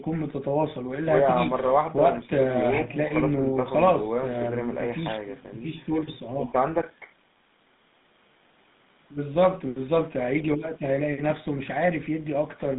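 From start to finish the speech has been through a GSM full-rate codec, the original mobile-phone coder, at a rate that fits its 13 kbps. It rebuilds the voice from a vocal-tract model excited by a thinned, regularly spaced pulse train, so the detail between pulses is lost. The result is a plainly audible buzzy, gravelly roughness, heard within a narrow band of about 150 Hz to 3.7 kHz.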